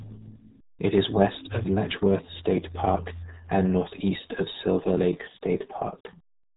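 From start to finish the speech carries the RealAudio 14.4 codec's heavy damage. Nothing above 3.8 kHz survives, and the squeezed bit budget, which fits an 8 kbit/s dial-up codec, leaves the voice muffled and gargly, with smeared, bubbling consonants and vowels.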